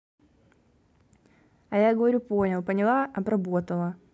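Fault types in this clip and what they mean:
No faults can be heard anywhere in this recording.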